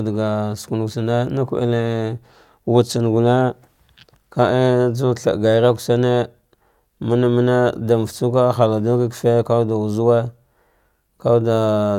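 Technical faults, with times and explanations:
No technical faults can be heard in this speech recording. No working path is listed for comment, so there is nothing further to report.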